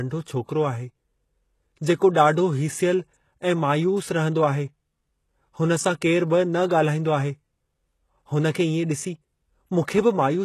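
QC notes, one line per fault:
throughout: HE-AAC compression. Gritty, metallic s sounds and nothing above 12.3 kHz, likely from treble rebuilt by spectral band replication, consistent with a bitrate of about 16 kbps.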